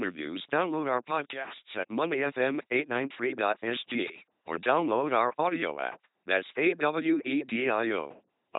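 From start to finish the speech passes through an LPC-10 vocoder with heavy damage. Each moment is rebuilt from a ten-pole vocal tract filter fed either a pulse train or noise, so the voice turns into a buzzing, mechanical robot with hiss or buzz wherever voicing is misjudged. Nothing remains above 3.8 kHz. Unlike simple band-limiting, the natural voice texture itself is replaced, which fits a rate near 2.4 kbit/s.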